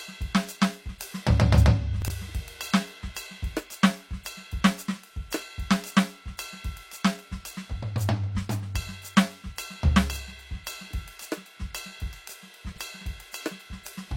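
At 2.02 to 2.10 s and 12.72 to 12.78 s, 20 ms chunks play out of order, three then two chunks late. Each moment sounds jumbled, with hard joins.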